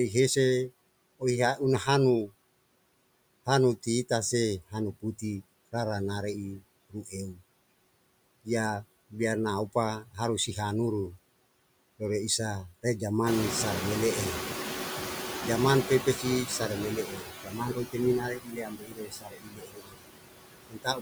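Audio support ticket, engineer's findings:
Noise suppressor artifacts throughout: background pulled down by about 21 dB, sinking in gaps and rising under speech. Frame-by-frame band gating by the noise suppressor.

Speech cut by the noise suppressor at 6.9–7.14 s (about 14 dB deepest), 17.06–17.97 s before "mi na" (about 18 dB), 18.2–20.08 s after "mi na" (about 21 dB), and 20.68 s to the end (about 22 dB). Quiet speech is misclassified as noise and attenuated, so it sounds swallowed and faint. The 18.2–20.08 s cut is longest, roughly two seconds.

Noise suppressor catching up at 13.26–16.73 s, after "rere isa re". Room noise steps up by about 16 dB near 13.5 s. The noise estimate lags, so the noise passes under-reduced before adapting over 3.47 s, with only about 9 dB of cut during the transition.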